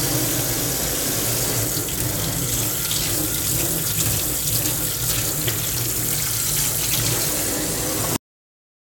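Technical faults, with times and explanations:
8.16 s, cut-off end: the sound just stops mid-event and drops straight to digital silence for the last 0.7 s or so, with no decay at all. The final stretch of buffers never got written out, so playback hits a hard wall.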